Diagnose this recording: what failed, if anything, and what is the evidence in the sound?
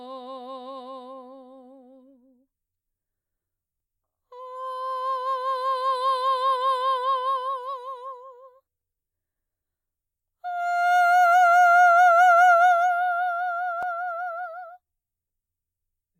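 Overlapping chunks in the buffering stage: the music was handled in blocks of about 5.0 s, and at one join the next block started before the previous one had finished. At 13.83 s, the overlap makes about 12 ms of the music play twice in immediate succession, which is heard as a brief click or stutter in the flow. The fault appears only at that single boundary.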